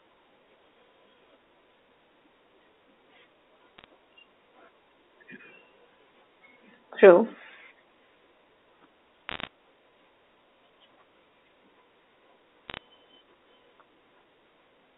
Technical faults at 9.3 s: bit errors on a digital phone line

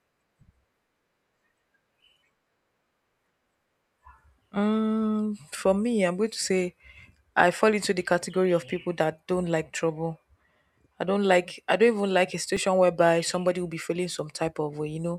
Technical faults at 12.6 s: underrun with held sample

